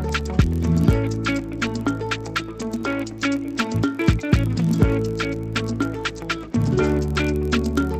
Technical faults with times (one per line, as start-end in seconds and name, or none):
0.00-7.99 block size mismatch (padded)